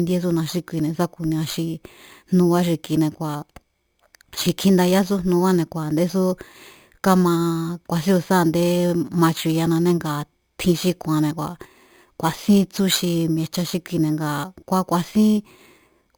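From start to end, the speech carries imaging from sample-and-hold upsampling. Each original sample was simply repeated to raise the rate, with no smoothing filter. That fits a rise from about 11 kHz to 44.1 kHz. Mirror copies of the spectrum fold up above the old band. The lowest copy sits between about 5.5 and 11 kHz, roughly 19 dB under the speech. It sounds like a bright metallic fizz that rises and falls with the speech. Its pitch moves against the voice's.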